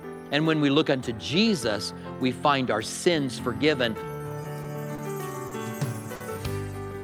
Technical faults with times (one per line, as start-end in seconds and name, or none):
4.62-4.65 short stall from a late packet
4.95-4.99 short stall from a late packet
5.47-5.52 short stall from a late packet
6.15-6.21 short stall from a late packet